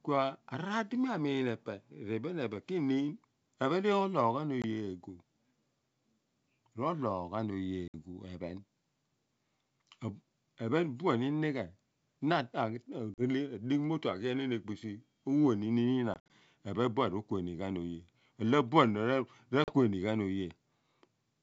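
Speech, carried as clear wideband G.722 audio, is broken by short, hard-edged silent holes at 4.62, 7.88, 13.14, 16.14 and 19.64 s. They last 20 to 100 ms, the one at 16.14 s scattered over 160 ms. Each ends in slightly distorted sound before it settles. This is packet loss on an ADPCM call, which fits one to a few packets lost at a time, with the decoder's predictor and step size briefly thrown out of step with the sender's.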